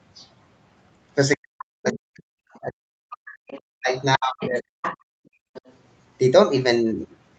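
Speech suppressed in double talk runs from 1.36 to 4.68 s: the voice dips, at worst by around 40 dB, likely because the echo canceller could not separate this talker from loudspeaker echo during simultaneous speech. Other side's voice leaking through appears at 2.52–2.60, 3.26–3.60, 3.99–4.03, 4.41–4.48, 4.82–4.97 and 5.54–5.73 s, as scraps roughly 10 to 35 dB below the speech, likely residual far-end echo the canceller failed to remove. Background gated by the echo canceller follows from 4.97 to 5.53 s, with room sound dropping by about 39 dB while the canceller clamps the microphone.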